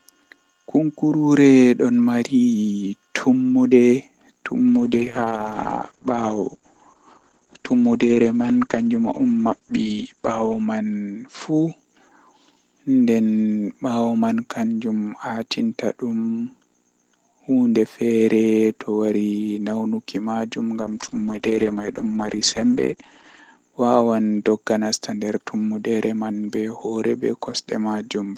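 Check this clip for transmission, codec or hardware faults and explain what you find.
Two call bitrate drops, at 4.68 to 11.83 s and 20.83 to 23.63 s. The encoder starves for bits, bandwidth collapses from 20 kHz to 8 kHz, and speech turns muffled and watery, consistent with roughly 11 kbps.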